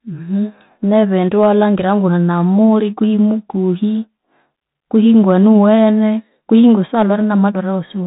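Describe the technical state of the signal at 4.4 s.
At 4.4 s the speech carries the Bluetooth CVSD headset codec, present across the whole clip rather than at that moment alone. CVSD sends one bit per sample, stepping the waveform up or down with an adaptive step size, which fits a 64 kbit/s stream. Nothing above about 3.8 kHz survives, so the speech sounds narrow. The damage is plainly audible: loud high sounds outrun the step and distort, s sounds turn scratchy, and a granular hiss sits underneath.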